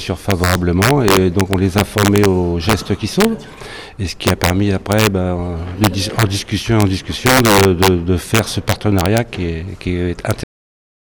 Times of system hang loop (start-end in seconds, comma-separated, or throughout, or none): none